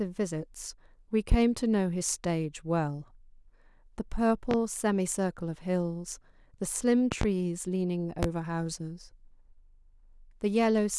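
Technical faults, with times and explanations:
1.32–1.36 s, 4.51–4.55 s, 7.12–7.25 s (a double) and 8.23–8.27 s, loud pop: a voltage pulse, likely from a plug, switch, static or driver glitch, adds sharp pops about 15 dB above the speech, which continues underneath.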